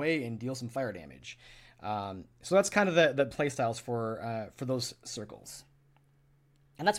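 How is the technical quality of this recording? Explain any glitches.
The recording has one glitch near the end. From 5.44 s to the end, just after "for uh for those", a section at the wrong speed plays 1.16 times too fast. Pitch and tempo jump together, so the speech turns hurried and about three semitones higher. The likely cause is that part being played or resampled against the wrong clock.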